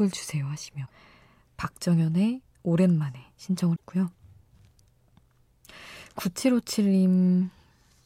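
At 0.85 s and again at 3.75 s the speech jumps ahead and the next 50 ms or so, about two 26 ms frames, comes out corrupted, most likely a broken MP3 bit reservoir after dropped frames.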